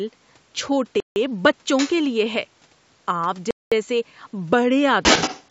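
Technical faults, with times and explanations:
1.00–1.16 s and 3.51–3.72 s, Bluetooth stall: the audio just drops to dead silence, about 160 ms the first time and 210 ms the second, then carries on again. The likely cause is radio interference holding up packets on the wireless link, so the headset's buffer runs empty and playback sits idle until the resent packets turn up. That's why you get a clean hole rather than crackle or distortion.
1.77–1.91 s and 5.03–5.50 s, other side's voice leaking through: a second voice bleeds in alongside the main talker. The first is a short scrap sitting roughly 10 dB down. The last half-second is worse, with the intruding voice a few dB louder than the talker. Most likely the far end's audio was coming out of a loudspeaker on the talker's device and the echo canceller didn't fully scrub it out of the microphone feed.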